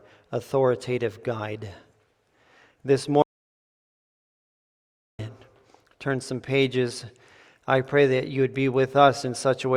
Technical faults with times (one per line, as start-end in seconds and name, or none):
3.22-5.19 audio dropout to silence